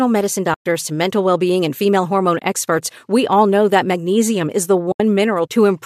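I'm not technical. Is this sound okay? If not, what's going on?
No. Three times, short pieces of the data carrying this speech went missing, and the player filled each gap with silence. This is AAC frame loss with muting. It happens at 0.54 to 0.66 s, just before "to mental well being"; at 2.39 to 2.42 s, between "being and female hormone" and "experts we all know"; and at 4.92 to 5.00 s, right after "that magnesium is the". You hear brief soft dropouts that fade out and back in. The longest lasts about 120 ms. The underlying low-delay compression is likely AAC-ELD, the kind used in video calls.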